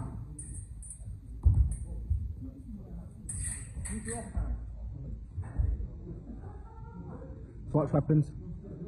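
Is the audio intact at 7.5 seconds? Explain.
No. At 7.5 seconds the audio is inside an adaptive stream at a lower bitrate stretch that begins abruptly at 4.29 s and runs to the end. The player evidently switched to a much cheaper encoding, which fits a step from roughly 96 kbit/s AAC down to about 12 kbit/s HE-AAC. Nothing remains above 11.1 kHz, the upper treble is gone and artefacts thicken. Unlike a dropout or packet loss, there is no gap, only a sustained drop in quality.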